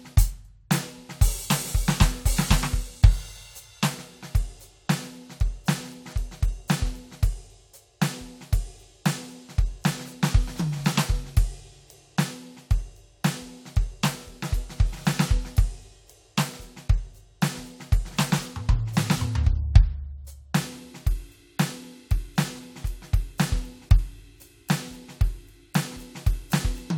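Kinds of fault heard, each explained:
No technical faults can be heard anywhere in the music, and the signal stays continuous and stable throughout.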